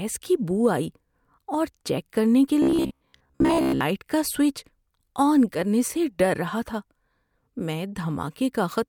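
From 2.62 to 3.81 s, right after "اور چیک کرنے کے" and before "کا سوئچ", the speech turns into a stiff metallic buzz at about 67 Hz: robotic sound from repeated short buffers. The likely cause is late-arriving audio being covered by looping a roughly 15 ms fragment across most of the stretch, so real material is skipped. On a spectrogram this appears as flat, evenly spaced harmonic lines at multiples of 67 Hz; the waveform shows near-identical cycles repeating.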